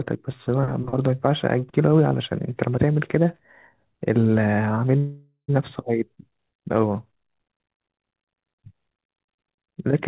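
At 4.98 s the speech stops and a call audio freeze begins, lasting until about 5.50 s. The receiver stretches the last sound into a fading buzz or hiss for roughly half a second, with about 100 ms of silence in it. The likely cause is packets held up in transit, draining the jitter buffer. When they arrive, speech resumes where it stopped. Nothing is lost, but everything after runs about 0.5 s later. The narrow band, with nothing above 4 kHz, fits the G.711 codec.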